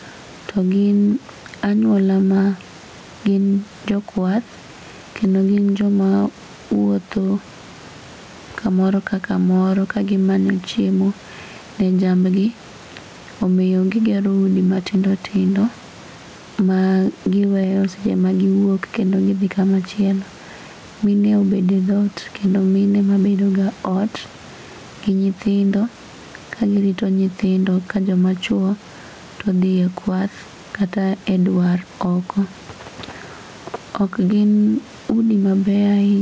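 Throughout the speech, gain pumping: the input gain was likely set far too high, with a fast limiter clamping each loud sound. The level swings by around 10 dB, and the room noise sits about 33 dB below speech.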